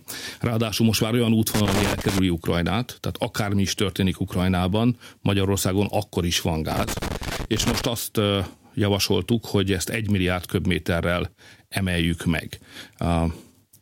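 Loose connector crackle breaks into the speech twice: from 1.54 to 2.19 s, just after "most már olyan", and again from 6.72 to 7.85 s, after "akkor is van" and before "azt javasoltuk hogy ezt". A worn contact is making and breaking as it shifts, chopping the signal, so each stretch sounds like irregular scratchy crackle. On a waveform these show as ragged dropouts and sharp spikes; a spectrogram shows scattered broadband vertical streaks.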